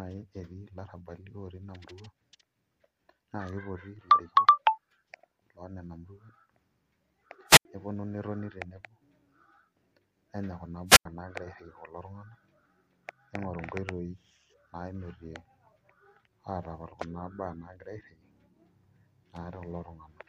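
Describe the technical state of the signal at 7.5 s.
At 7.5 s you're inside a wireless microphone squelch dropout, running from about 7.48 to 7.65 s. The transmitter's FM signal fades at the receiver, so there's a short swell of hiss and static, and then the receiver's squelch kicks in and mutes the output for about 83 ms. That leaves a little hole of near silence before the speech comes back once the signal recovers.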